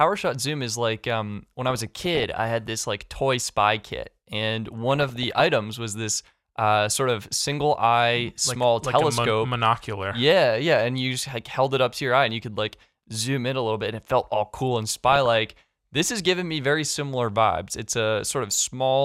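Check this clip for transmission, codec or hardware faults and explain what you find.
DAB burbling occurs three times in this speech clip: 1.68 to 2.24 s, 4.95 to 5.40 s, and 14.89 to 15.36 s. Weak reception lets residual bit errors, on the order of half a percent, slip past error correction into the MP2 stream. Corrupted samples put short blips of noise into single sub-bands, and corrupted scale factors make individual sub-bands leap in level for up to a frame, so each burst puts burbling noise over the speech.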